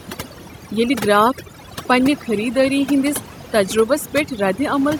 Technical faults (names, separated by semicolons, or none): overdone noise removal